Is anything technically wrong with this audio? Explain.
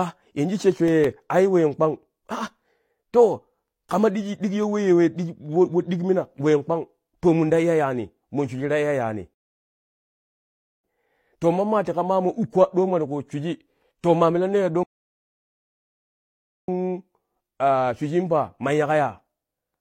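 Yes, a couple of things. Right at the start, from 0.56 to 1.21 s, there are CD scratch ticks: five tiny clicks, the longest only about a millisecond, just before "ai ween kpang". A blemish on the disc is wrecking more data than error correction can rebuild, once per rotation, so the player patches over the bad samples.

Later there are two rebuffering stalls. At 9.34 s the audio drops to silence for 1.5 s and picks up exactly where it left off with "to mammaa"; at 14.83 s it happens again for 1.85 s. The player ran dry of downloaded audio and waited, so nothing's missing, just dead air added.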